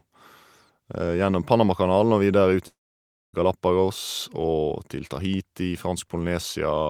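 Just after "videre ut", at 2.67 s, the speech breaks off into a brief buzzy continuation of the last sound that quickly fades, leaving near-silence for about 0.59 s until the audio returns at 3.35 s. This is likely a long network dropout: roughly 0.66 s of audio never arrived, and the receiver covered the gap. Unlike a short packet-loss click or an intentional pause, the fading tail and the skipped stretch of speech give it away.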